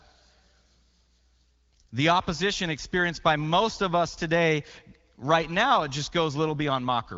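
Nothing goes wrong in this speech recording, which sounds like ordinary HD Voice audio passed through the AMR wideband codec, with nothing above 7.4 kHz and a level of detail that fits one of its higher rates, around 18 kbit/s.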